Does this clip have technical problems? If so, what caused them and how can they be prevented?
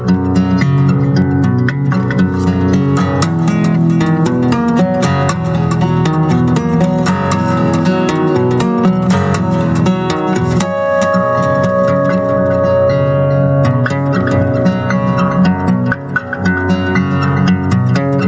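Yes. Gain pumping runs throughout: the gain swings by around 20 dB, squashing the dynamics, likely from input gain set far too high with a fast limiter clamping it. Lowering the microphone gain and easing the limiter would prevent it.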